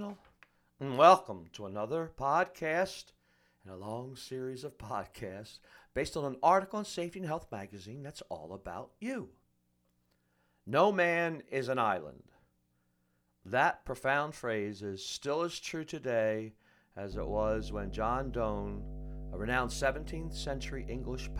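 From 17.12 s, just after "still as true today", mains hum enters and runs to the end of the clip. It is a steady low tone at 50 Hz with some low harmonics above it. It sits loud under the speech, only about 10 dB below it. The cause is power-line interference. A ground loop or a nearby transformer has coupled the 50 Hz supply into the signal path.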